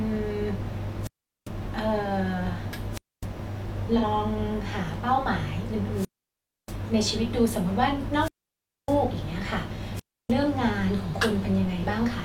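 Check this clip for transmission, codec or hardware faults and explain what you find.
Two faults turn up: a wireless link that repeatedly loses its signal, and one brief patch of lost codec data.

Wireless microphone squelch dropout, at 1.01–1.50 s, 2.91–3.27 s, 5.93–6.79 s, 8.15–8.99 s and 9.94–10.33 s. Each time the analogue FM radio signal weakened, the receiver's squelch shut the output rather than pass raw noise. The speech gives way to a short rise of hiss, then a gap of near silence lasting about 0.25 to 0.63 s, before the sound comes back.

AAC frame loss with concealment, at 3.98–4.03 s. About 43 ms of coded audio went missing, which fits a single lost AAC frame. The decoder patched the gap by reusing the last good spectrum, so that instant is a smeared, noisy or phasey blur in the speech rather than a clean break.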